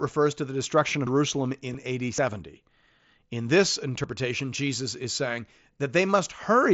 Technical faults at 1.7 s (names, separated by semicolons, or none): concealed Bluetooth headset packet loss